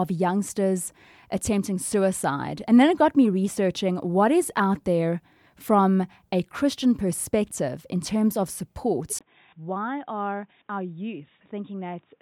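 Input likely switched to a poorer device at 9.19 s, after "in terms of support": a 20 ms gap, then duller, quieter speech cut above 3.8 kHz.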